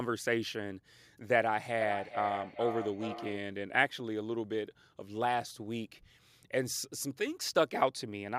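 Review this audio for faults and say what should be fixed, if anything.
From 1.8 to 3.48 s there is feedback echo between two devices: the speech returns at roughly 400 ms intervals, peaking about 8 dB below the direct speech. A second device in the room replays this microphone's signal, and the microphone picks it up again. Each device's echo canceller removes only its own playback, so this loop passes through. To prevent it, mute the microphone or speaker on all but one device in the room, or use headphones.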